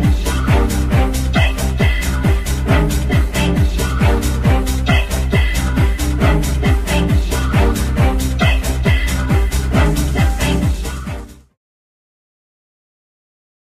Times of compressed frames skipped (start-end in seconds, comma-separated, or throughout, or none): none